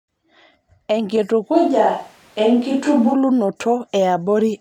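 A speech recording whose sound turns roomy and hollow from 1.55 s to 3.12 s, with thinner bass and background noise at roughly 35 dB below the speech, then snaps back; the likely cause is a switch to a distant microphone after the close one dropped out. The level stays about the same. On a spectrogram the low end thins, reverberant tails smear between syllables and the noise floor rises; the waveform shows abrupt edges and gaps that no longer fall silent.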